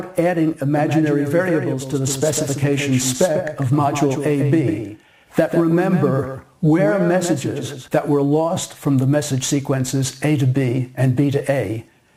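From 0.76 s to 7.88 s the sound carries a doubled audio track: a second, full-band copy trails the original by roughly 150 ms at about 5 dB lower, with no decay or room colour. Both its entry and exit are abrupt. It is likely a slower capture path or a misaligned edit holding two copies out of step.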